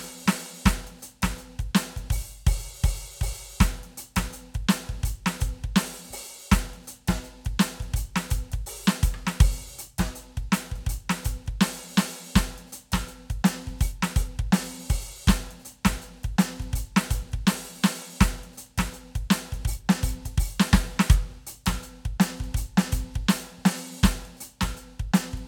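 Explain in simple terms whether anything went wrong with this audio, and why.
Nothing went wrong with this music audio, because no technical faults can be heard anywhere in it.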